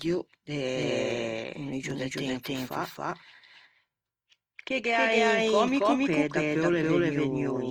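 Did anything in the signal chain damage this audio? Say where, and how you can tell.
Yes. Throughout the speech, every sound is followed by a second copy that is about as loud and arrives roughly 0.3 s later. That copy is dry, with no decay or room colour. This is a doubled audio track at the capture or mixing stage, likely from the signal being recorded a second time through a slower path.

Throughout, the speech has a grainy, rough, noisy texture rather than a swirling one, while the bandwidth stays full, reaching about 20.3 kHz. That points to Opus compression at the codec stage in its CELT music mode, which fits a low bitrate around 24 kbps. The encoder keeps each band's energy but fills bit-starved bands with folded or noise content, which roughens the tones.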